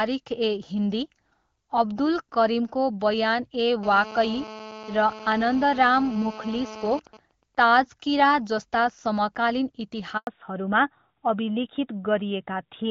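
From 3.83 s to 7.0 s a GSM phone buzz sits under the speech: a hard, raspy tone at 217 Hz with a dense stack of harmonics, about 15 dB below the speech and unrelated to it. A 2G handset in a call nearby is transmitting in bursts 217 times a second, and some stage of the audio circuit is rectifying those radio pulses into audio. Because the phone is in continuous call transmission, the buzz holds nearly steady for the whole span.

Between 7.07 s and 9.57 s the buzz gives way to GSM signalling bursts: even ticks with a longer 217 Hz buzz twice a second. They are far quieter, roughly 30 dB down. The same handset is still in its call, but with its user silent it sends only short groups of bursts rather than a continuous stream. The circuit still rectifies each group, so the interference becomes intermittent clusters instead of a constant tone.

At 10.17 s there is a handover gap lasting 100 ms. 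The call was moved from one network to another, and no speech frames arrived while the link switched over. The speech fades out within a few tens of milliseconds and stays silent until the new link delivers audio again, so whatever was said inside that tenth of a second is gone.

From 10.27 s to the end, a fallback to narrowband follows the handover. Before it, the wideband HD Voice coding is heard with light coding damage, consistent with AMR-WB at 12.65 kbit/s. After the switch nothing above 4 kHz remains, and the speech turns duller and rougher. That points to the new link running the older AMR narrowband codec at about 12.2 kbit/s, which cannot carry the upper band at all.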